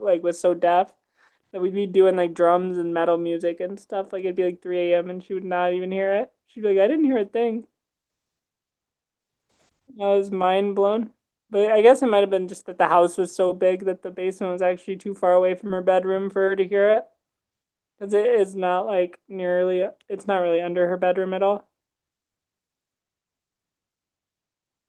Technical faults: short concealed packet loss

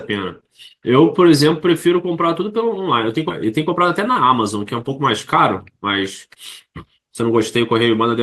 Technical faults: skip ahead; jitter buffer speed-up

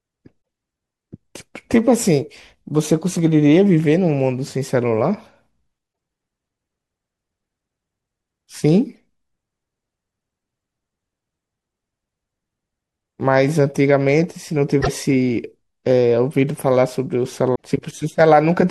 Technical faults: damaged data in a compressed stream

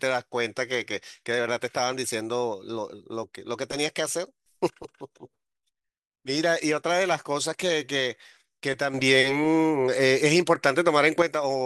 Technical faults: sudden gain jump

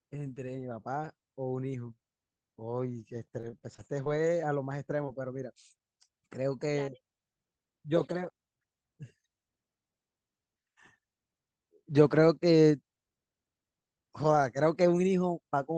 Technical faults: scattered short gaps

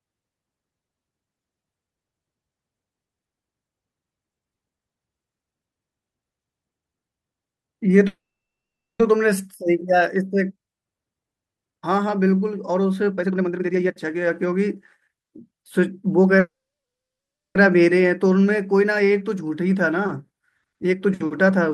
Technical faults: call audio freeze; jitter buffer speed-up

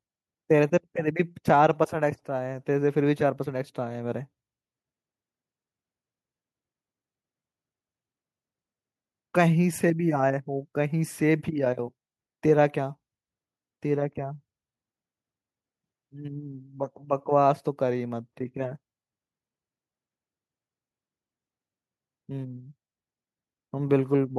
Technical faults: none

